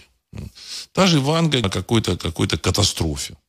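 At 1.63 s the speech is broken by a brief blip from damaged data in the compressed stream: corrupted bytes make the decoder misread a frame and lose sync before recovering. A spectrogram shows a narrow, smeared vertical stripe there, and the waveform an abrupt discontinuity.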